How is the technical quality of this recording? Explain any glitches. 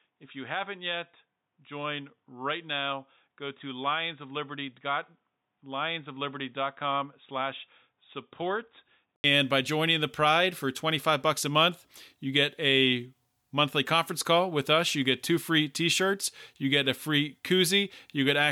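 The recording has one clear fault. Input switched to a poorer device, from 0 to 9.24 s: the first half sounds dull and boxy, with nothing above 3.8 kHz, a level roughly 10 dB lower, and faint background noise well below the speech. At 9.24 s there is a gap of about 80 ms, and then the sound opens up, brighter and louder, just before "by joining the". The likely cause is a narrowband input such as a headset's call profile that the system then switched away from.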